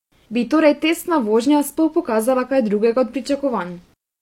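A speech recording carrying two bit error spikes. Each is a single sharp tick, broadband and unrelated to the voice. The first falls at 1.38 s, right after "torej testna". The second falls at 2.30 s, just before "kaj drugega od". Each lasts one sample. A flipped bit in memory or on a digital link throws that sample's value off by a power of two. The next sample returns to normal, so only a brief click remains.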